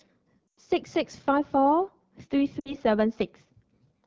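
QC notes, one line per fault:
throughout: AMR wideband (HD Voice) codec at a low rate. Speech sounds rough and raspy, which fits the 8.85 kbit/s mode. The spectrogram shows smeared harmonics below 6.4 kHz and a flat, noise-like band from 6.4 to 7 kHz, with nothing above it.
0.50–0.60 s and 2.60–2.77 s: lost AMR speech frames. The decoder repeats the last pitch and vocal tract settings at falling gain, so the sound drops to near silence within two frames. The first gap spans about 100 ms, which fits five frames, and the second about 60 ms, which fits three. On the waveform the envelope decays to near silence, and on the spectrogram the harmonics go flat before recovering weak.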